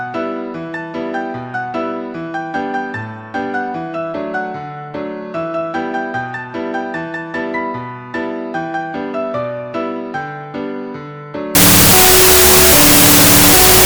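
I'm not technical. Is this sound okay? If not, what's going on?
No. From 11.55 s to the end, a wrong sample width fault turns the sound into loud noise with the original buried inside, playing at half speed and lower in pitch. This fits data stored as 32-bit float being read back as 16-bit numbers.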